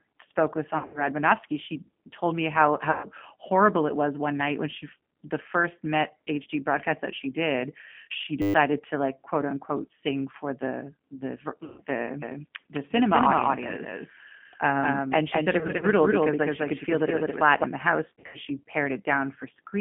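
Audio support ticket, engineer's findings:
G.729 codec on the whole call, 8 kbit/s pulse-excited rebuild, line band 150 Hz to 3.4 kHz. Speech band-limited, rough, slightly synthetic, codec damage plainly audible.

VoIP packet loss concealed by the speech codec at 0.78–1.04 s, 2.91–3.07 s (between "she told me how" and "horrible it was one"), 11.64–11.81 s, 15.59–15.86 s and 18.10–18.38 s. Decoder extrapolates the last frame, so sound smears into a fading buzz or coloured noise and stays weak afterwards.

System hang loop at 8.42–8.54 s, between "that she did she" and "to like quote unquote". System or driver stalled while hardware recycled a 10 ms buffer 12 times. Steady 100 Hz buzz, about a tenth of a second of audio lost.

Doubled audio track at 12.22–17.64 s, ending just before "in the house". Likely a second, slower capture path. Copy about 5 dB down, trailing by roughly a fifth of a second, dry echo with abrupt start and stop.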